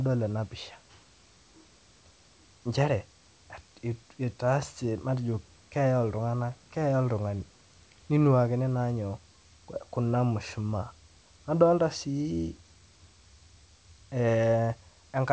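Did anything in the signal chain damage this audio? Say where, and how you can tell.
No, nothing in the signal chain stood out on listening to this speech.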